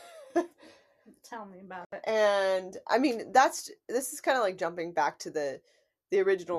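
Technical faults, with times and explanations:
1.85 to 1.93 s, digital broadcast dropout. The speech cuts to silence for about 72 ms, then resumes mid-programme. The receiver lost valid frames, which fits about three failed frames, and muted until good data returned. What was sent meanwhile is gone.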